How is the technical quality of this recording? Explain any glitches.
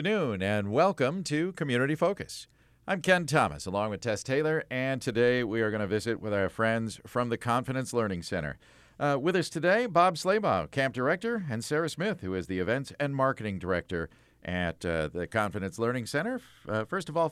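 Nothing technically goes wrong anywhere in this recording.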